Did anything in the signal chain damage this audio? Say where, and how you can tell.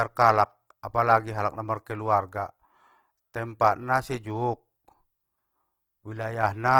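Yes, at the codec stage: throughout, the speech sounds grainy and rough, likely from Opus compression. Energy reaching 20.2 kHz fits its CELT mode at around 16 kbps.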